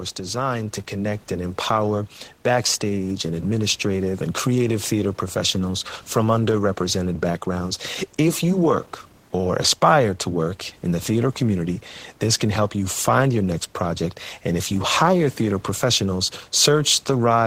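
From 0.21 s to 7.83 s the automatic gain rises: the gain control, reading the input as too quiet, lifts its gain by about 8 dB. The speech and the room noise, sitting about 33 dB below it, swell together over those seven-plus seconds.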